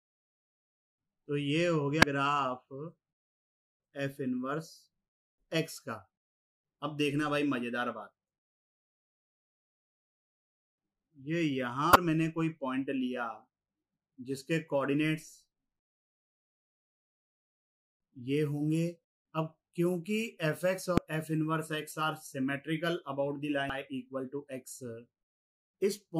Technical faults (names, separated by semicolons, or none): damaged data in a compressed stream